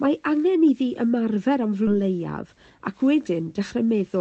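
At 1.87 to 1.89 s the speech jumps forward abruptly, with roughly 0.7 s gone. This is a skip ahead: audio was dropped while later packets waited, and the two sides join almost seamlessly. From 3.80 to 4.16 s the speech sounds hurried at unchanged pitch, running at 111% speed. This is a jitter buffer speed-up, trimming around 50 ms of pitch periods to shrink accumulated delay.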